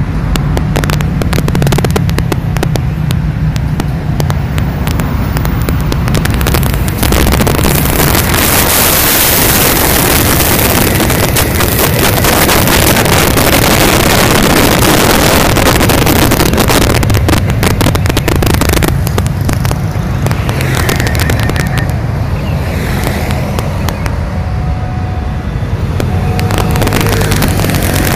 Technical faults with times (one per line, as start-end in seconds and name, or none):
0.00-28.15 integer overflow